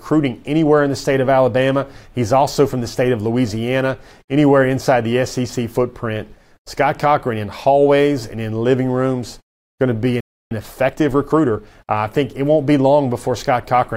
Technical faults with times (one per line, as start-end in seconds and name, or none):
10.20-10.51 playback stall
10.51-11.73 time-compressed catch-up